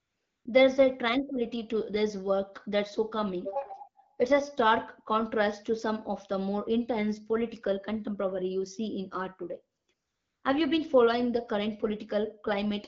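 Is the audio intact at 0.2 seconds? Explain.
No, AMR comfort noise covers 0.2 seconds, running from the start of the clip to about 0.45 s. The phone treated this opening stretch as silence and sent no speech frames, so the receiver built a stand-in from a rough summary of the background's level and spectral shape. What you hear is a smooth, even hiss in place of the real room sound, with any faint background detail in that half-second lost.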